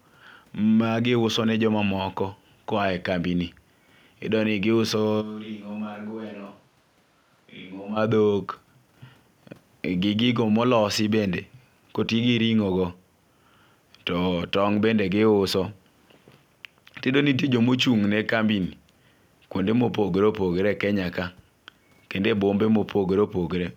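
From 5.23 to 7.95 s the speech abruptly turns hollow, about 10 dB quieter and noisier, likely a switch to a distant microphone.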